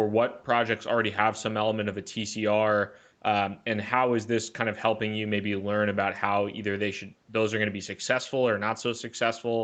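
Nothing stood out on listening to this speech.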